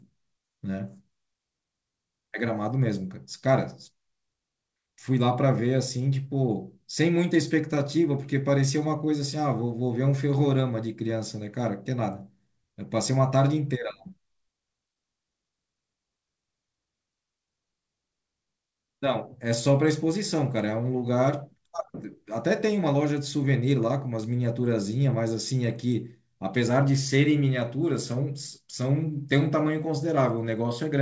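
The speech comes through a call path working as intended, with its coding noise at the level expected and nothing above 8 kHz, which fits a wideband codec such as G.722, and no technical faults are present.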